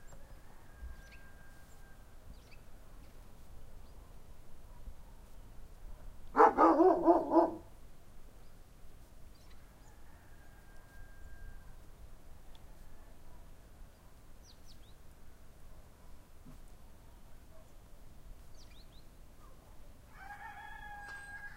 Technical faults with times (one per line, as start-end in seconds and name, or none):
none